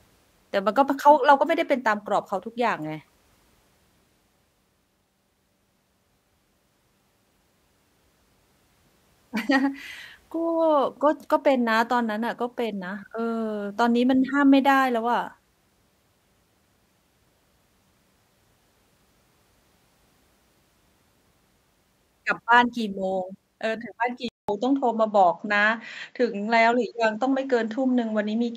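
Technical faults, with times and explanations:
24.29 to 28.57 s, input switched to a poorer device: after a short 200 ms gap the speech turns duller, with nothing above 7.6 kHz, a few dB level shift and a new faint noise floor, most likely the recording jumping to a narrower-band microphone.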